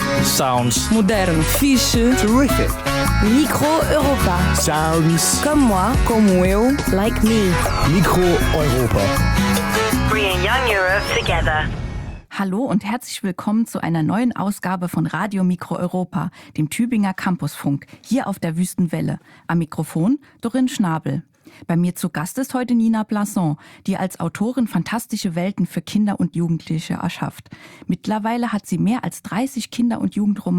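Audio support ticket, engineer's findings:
Nothing stood out on listening that would point to a fault in the audio path.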